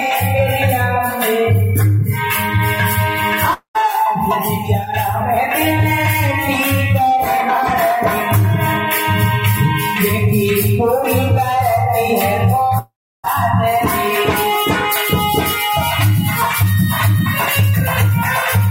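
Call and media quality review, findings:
Long network dropout at 3.53–3.77 s and 12.79–13.26 s: the last sound is stretched into a fading buzz, then silence (about 120 ms, then 340 ms). Audio resumes minus roughly 220 ms and 460 ms. Likely packet loss upstream, with concealment running out.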